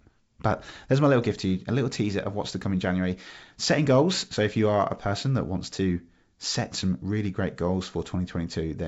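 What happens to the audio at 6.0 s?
Nothing goes wrong at 6.0 s: the speech there carries through intact, with the G.722 wideband telephone coding at 64 kbit/s leaving at most a faint trace of its light upper-band hiss.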